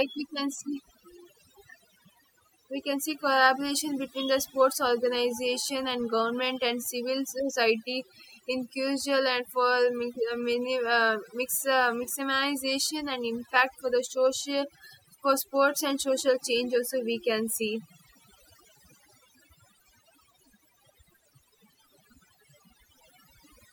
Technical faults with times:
0.00-23.73 overdone noise removal

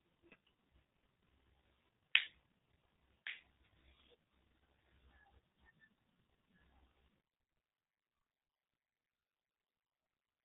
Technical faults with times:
0.00-10.45 G.723.1 codec
7.21-10.45 one channel inverted

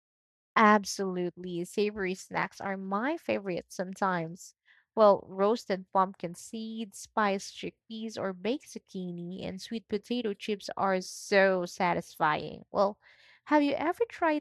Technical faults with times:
none

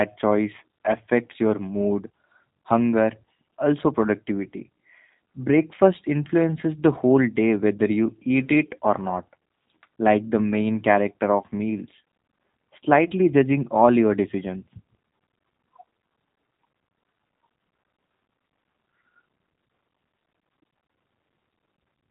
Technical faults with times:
0.00-22.11 G.729 codec

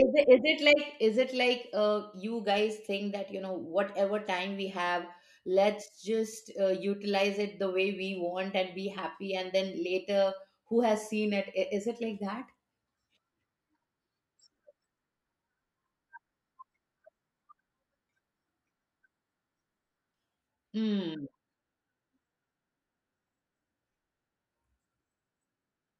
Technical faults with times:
none

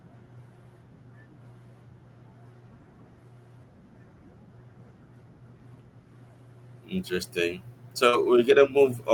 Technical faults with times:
8.09-8.15 short concealed packet loss
8.13 lost packet rebuilt from error correction

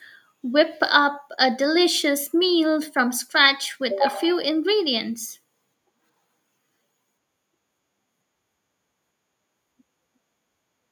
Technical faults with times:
none

